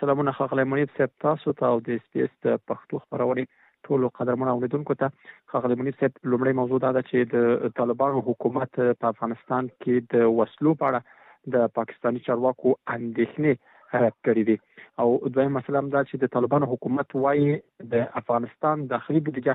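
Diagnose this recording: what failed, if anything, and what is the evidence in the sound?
Nothing failed; no stage shows any fault here.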